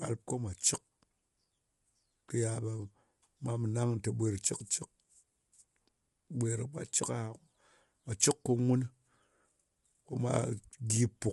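Throughout the speech, the voice sounds rough and grainy, with noise filling the gaps between harmonics. Nothing is present above 11.6 kHz. This is likely low-delay AAC compression (AAC-ELD). Its short frames resolve pitch poorly at a bitrate that fits about 32 kbps.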